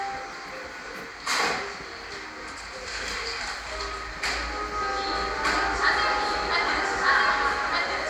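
A recording of everyday sounds. From 5.15 s to the end, it has a doubled audio track. A second, full-band copy trails about a second behind at roughly the same level. It appears abruptly, with no decay or room colour. The likely cause is a slower second capture path or an out-of-step edit.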